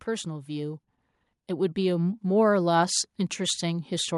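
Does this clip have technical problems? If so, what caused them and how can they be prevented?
Yes. From 1.47 to 4.12 s, automatic gain rising lifts level about 6 dB. The AGC judged input too quiet, raising voice and background together. Prevent it by disabling AGC and setting fixed gain.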